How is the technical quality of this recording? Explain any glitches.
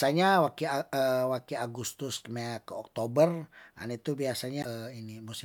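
One glitch stands out in this speech recording. From 4.61 to 4.65 s a brief glitch interrupts the audio, likely a broken MP3 bit reservoir: after missing frames, the decoder borrowed stale bytes, fitting 26 ms frames. Unlike a clean dropout, the sound jumps ahead.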